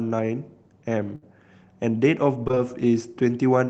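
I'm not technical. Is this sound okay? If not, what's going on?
No. At about 1.15 to 1.24 s the speech briefly turns into a held buzz or fading hiss, then jumps ahead. This is a burst of packet loss: a chunk of audio never arrived, so the call software stretched the last sound for about 64 ms, and roughly 60 ms of speech is simply gone.

From about 2.44 to 2.58 s the voice goes choppy and robotic. This is repeated packet loss: four short dropouts, the longest around 21 ms, came one after another. Each was patched by repeating the previous sound, so nearly half that stretch is filler and about 80 ms is missing.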